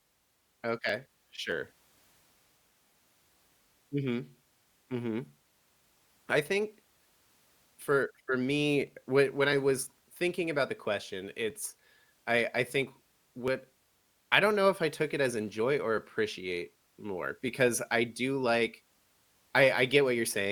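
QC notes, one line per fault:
0.89 s and 8.87 s: overlap between stream segments. Two tiny skips, with the audio jumping forward slightly. The segments here are 1.0 s long, and at these joins two segments claim the same moment. The player trims the shared stretch, but that sound was never actually duplicated. A few milliseconds are discarded, and the waveform steps abruptly from one value to another.
1.52 s to 19.49 s: clock drift buffer slips. A regular click or small pop recurs every 2.01 s while the speech runs, around ten in all. The likely cause is two devices on separate clocks disagreeing by roughly 300 parts per million. The buffer between them slowly drifts until a block of about 30 samples must be dropped or repeated. Each slip breaks the waveform briefly, so the clicks keep a steady rhythm.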